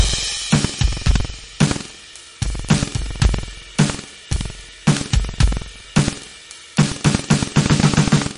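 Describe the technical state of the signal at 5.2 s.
At 5.2 s the music is carrying buffer tearing, and it runs through the whole clip, not just this moment. The writer and the hardware reader of the ring buffer have drifted so they cross partway through every period. Roughly a tenth of each buffer is stale audio from about a tenth of a second earlier, spliced in with hard edges. You hear it as a steady rattly buzz at 21.5 Hz, which fits a 2048-sample buffer.

On top of that, the top end stops dead at 10.6 kHz, and the sound has a watery, swirly quality with smeared attacks and metallic chirps on bright, noisy parts. That's plainly audible damage, also present for the entire clip, and the likely cause is MP3 compression at a low bitrate, something around 41 kbps. Short on bits, the encoder chopped off the treble and kept dropping weak frequency lines in and out from frame to frame.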